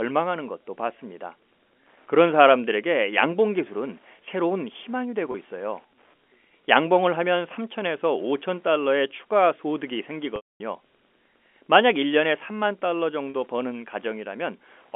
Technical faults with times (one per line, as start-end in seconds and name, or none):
0.00-14.95 Wi-Fi interference
5.32-5.34 packet loss with pitch repetition
10.36-10.60 packet loss with pitch repetition
13.30-13.34 packet loss with pitch repetition